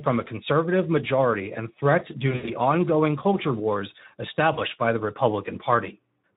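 A speech recording carrying plainly audible Speex codec damage from start to finish: the voice sounds hoarse and noisy, as the CELP coder starves its excitation of bits, a quality level that fits a setting around 11 kbps. VoIP packet loss concealed by the speech codec occurs twice. From 2.31 to 2.50 s, about 120 ms of audio is missing across 160 ms, with the longest gap around 80 ms. From 4.53 to 4.61 s, 40 ms is lost. In both places the decoder stretches the last pitch and filter into a fading buzz or coloured noise, and the voice stays weakened briefly afterward.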